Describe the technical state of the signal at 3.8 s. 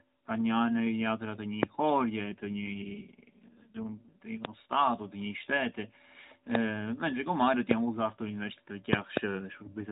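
An AMR rate drop covers 3.8 s, spanning 2.24 to 4.13 s. The mobile codec steps down from its usual rate to what sounds like about 5.9 kbps, trading bits for error protection, so the speech turns rougher and more synthetic without any gap or band change.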